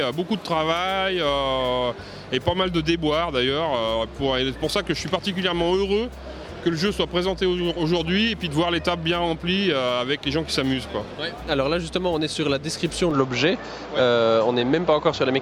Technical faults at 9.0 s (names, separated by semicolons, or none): none